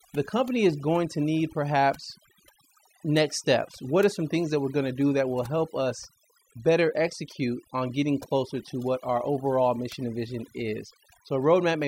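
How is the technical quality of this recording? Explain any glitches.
The speech suffers from overdone noise removal, present for the whole clip. An aggressive noise reducer pulls frequency bands down wherever they sit near its noise estimate, taking quiet speech detail with them. Pauses drop to near silence with twinkling specks.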